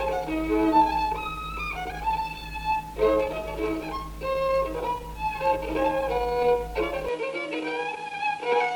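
From 7.09 s to the end, the sound abruptly loses its top, with nothing above 11.4 kHz, and a faint new noise floor appears well below the signal at a similar level. This is likely the input switched to a poorer device, with no gap at the change.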